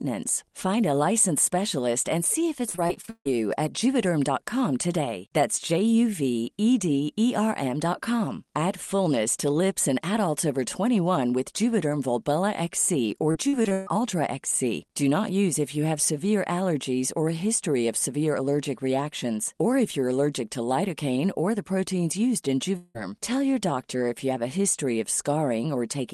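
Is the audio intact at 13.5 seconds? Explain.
No. Between 13.31 and 13.89 s the call stream suffers repeated packet loss: five gaps, the longest 141 ms, are patched by extending the preceding sound, so nearly half that span is concealment. The speech turns choppy and robotic, with pieces missing.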